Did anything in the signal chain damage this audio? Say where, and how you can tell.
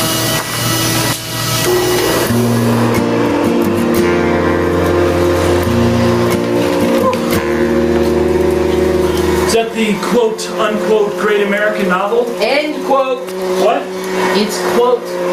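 Yes. Gain pumping runs through the whole clip, and it was likely introduced at the capture stage, where the input gain sat far too high and a fast limiter or compressor kept clamping it down. The gain swings by around 20 dB. On the waveform, loud and quiet passages sit squashed to a similar height.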